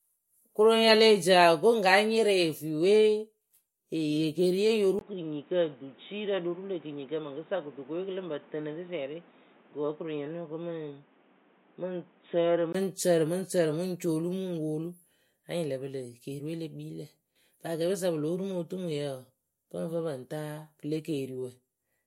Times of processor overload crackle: none

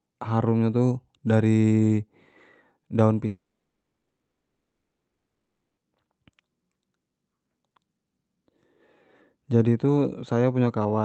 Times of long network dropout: 3.27-5.79

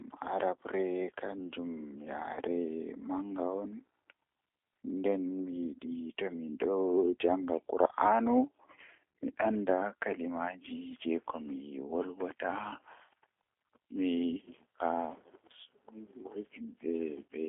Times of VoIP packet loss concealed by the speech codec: 2.34-2.40

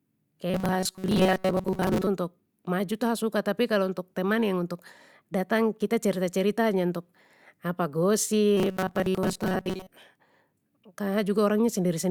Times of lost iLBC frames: none

